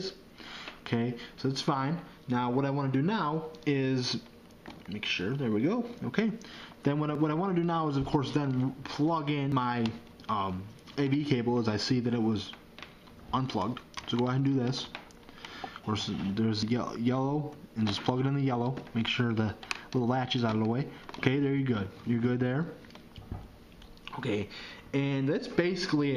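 At 7.15 s the sound jumps forward, losing about 50 ms; at 9.52 s a longer skip of around 150 ms; then two more short skips of about 50 ms at 15.84 s and 16.63 s. Each is likely a dropped buffer (overrun), where samples were overwritten before being read and the edges were spliced together. The waveform shows an abrupt discontinuity with no gap, and the spectrogram a thin broadband vertical line.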